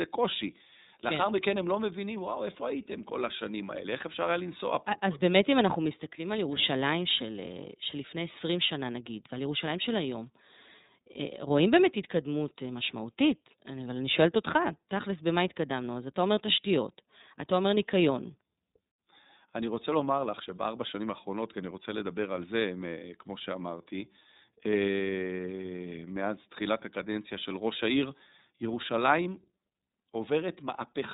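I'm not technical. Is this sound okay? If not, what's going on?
No, not quite. The whole clip has passed through the iLBC codec, a phone-grade voice squeezer. It chops the speech into 30 ms chunks and cuts everything above about 3.8 kHz, so it sounds muffled, thin and a bit rough and robotic from start to finish.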